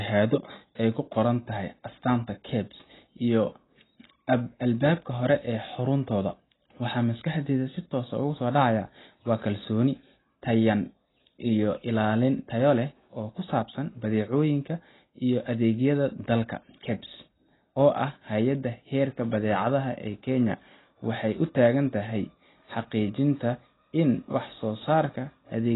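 Throughout, the speech sounds dull and smeared, with nothing above 3.9 kHz and a fizzy, warbling texture, likely heavy AAC compression, which fits roughly 16 kbps.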